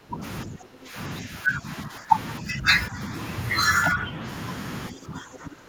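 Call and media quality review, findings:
Speech suppressed in double talk: near-end speech ducks at 0.0–0.22, 0.45–0.96, 1.22–1.68, 1.85–2.12, 2.4–2.66, 2.89–3.11, 3.94–4.23 and 4.9–5.68 s. Deepest cut is about 20 dB at the start. Likely echo canceller attenuating the talker during far-end speech.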